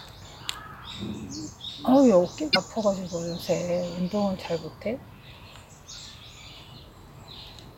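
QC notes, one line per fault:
2.50–2.57 s, damaged data in a compressed stream: a short glitch lasting about 70 ms. Part of the encoded stream at this point was corrupted, so the decoder misread the affected frames, lost its place in the stream and had to hunt for the next valid frame header before decoding normally again. The garbled frames produce the glitch.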